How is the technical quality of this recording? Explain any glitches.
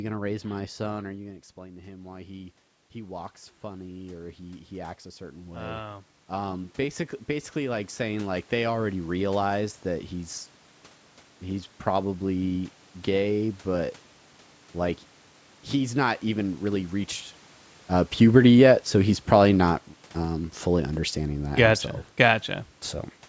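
There is one glitch, automatic gain rising. The talker moves away around 1 s, and the input drops about 11 dB. From 1.57 s to 8.99 s, the gain control slowly adds about 14 dB. The voice and room noise swell together.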